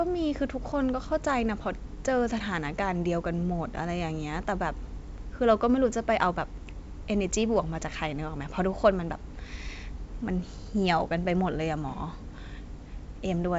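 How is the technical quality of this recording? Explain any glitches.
No glitches turn up anywhere in the recording. It carries G.722 wideband telephone coding at 64 kbit/s, so the speech reaches up to about 7.7 kHz with nothing above that.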